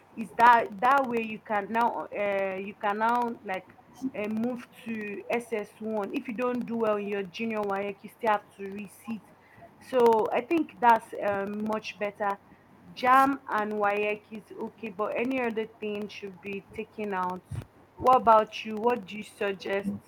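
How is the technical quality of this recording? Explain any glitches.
The recording has three technical problems: a steady ticking throughout, repeated dips in the speech level, and one brief faint echo.

Periodic USB or driver dropouts run from 0.08 s to the end. Every 64 ms, something stalls the USB bus or the audio driver, and the audio for that moment is lost and replaced with silence. The result is a rhythmic train of small ticks or clicks at roughly 15 per second. They are audible while speech is present and vanish in pauses, because a silent gap in silence leaves nothing to hear.

Speech suppressed in double talk occurs in four stretches: 0.69 to 5.3 s, 6.24 to 10.48 s, 12.39 to 14.3 s, and 15.71 s to the end. The likely cause is the far side talking at the same time, so the echo canceller could not tell this talker from loudspeaker echo and turned everything down. The voice dips by up to about 15 dB in the first stretch, about 20 dB in the second, only about 5 dB in the third, and about 15 dB in the last. 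Each of the first two stretches loses well under a second in total, and the third loses a few tenths of a second.

An echo leak appears at 3.77 to 3.82 s. The far end was likely playing the call on a loudspeaker, and its echo canceller let a fragment of its microphone pickup through. A very faint copy of the speech, about 30 dB below it and delayed by 268 ms, is heard as a short ghostly scrap trailing the original.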